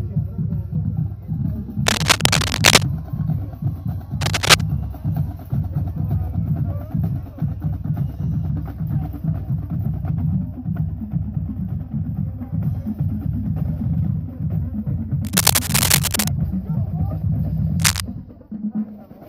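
Cable scratch noise turns up four times, at 1.86 to 2.83 s, 4.21 to 4.62 s, 15.25 to 16.28 s and 17.79 to 18.00 s. Each burst is a rough, uneven rustle sitting about 5 dB above the sound. It's likely a worn connector or cable being moved.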